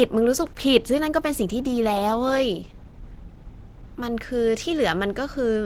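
From the very start until 4.0 s, the speech is an adaptive stream starting at a low bitrate. The player opened on a cheap version to get going fast, so the top end is thin and a bit synthetic, with stronger codec artefacts, which fits something like 16 kbit/s Opus. At 4.0 s it has measured the connection and jumps straight to a richer stream, closer to 64 kbit/s, with no gap. The brightness suddenly fills in, reaching up to about 20.3 kHz.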